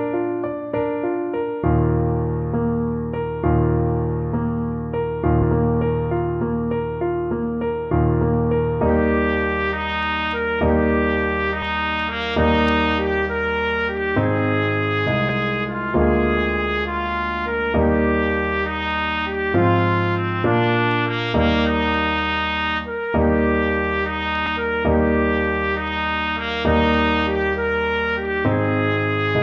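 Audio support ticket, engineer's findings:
Compressed frames skipped at 5.41, 11.61, 15.28 and 24.45 s: the audio jumps ahead, losing roughly one, two, one and four 23.2 ms frames. Frames are missing from the file or were rejected by the decoder.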